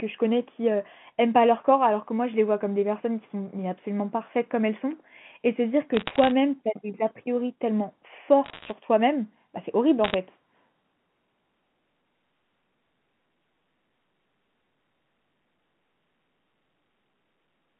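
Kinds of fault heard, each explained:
Bit errors on a digital phone line: flipped bits on the G.711 A-law link corrupt single samples, giving sharp ticks and crackle over otherwise intact speech in bursts at 5.95–6.31 s, 8.44–8.72 s and 10.04–10.14 s, an error rate of about 0.5 to 0.7 percent.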